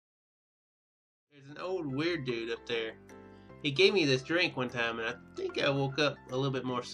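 Nothing here is a fault: the sound eases in with an editor's gentle fade from around the 1 s mark, reaching full level by about 2.13 s, and there's nothing wrong to point to after that.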